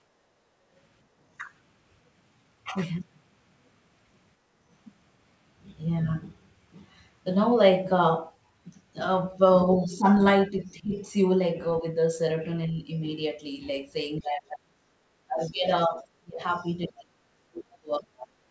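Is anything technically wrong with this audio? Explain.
Yes. The background is gated by the echo canceller at 0.2 to 0.62 s and again at 4.38 to 4.52 s. Each time the room sound dips by about 6 dB and about 7 dB respectively, for roughly 150 ms in total per event, then returns. This happens when the canceller judges loudspeaker playback to be active and pulls the microphone gain down hard. What you hear is the ambience briefly sinking and coming back rather than anything clipped from the talker.

Speech is suppressed in double talk from 9.81 to 12.91 s and from 14.19 s to the end of the clip. In the first stretch the talker's voice dips by roughly 10 dB across about a second in total. In the second the suppression goes much deeper, roughly 35 dB, so parts of the voice largely vanish. The likely cause is the canceller failing to separate the near talker from loudspeaker echo while both sides speak, and attenuating everything together.

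The other side's voice is leaking through at 9.84 to 9.98 s, as a short scrap sitting roughly 25 dB below the talker, and again from 15.46 to 16.68 s at roughly 30 dB below, heard as a faint second voice underneath. The likely cause is residual far-end echo that the canceller did not fully remove from the microphone signal. It coincides with the double-talk passages, where the canceller's estimate is at its weakest.

Nothing is present above 8 kHz, which fits a G.722 call path at 64 kbps together with the call's microphone processing.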